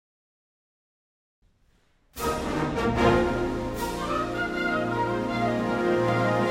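From 0.68 s to 6.09 s, clicks recur every 0.6 s, about ten in all. These are likely clock drift buffer slips: a clock mismatch of around 300 ppm forces a handful of samples to be dropped or repeated. A spectrogram shows thin, evenly spaced vertical broadband lines, and the waveform shows step discontinuities.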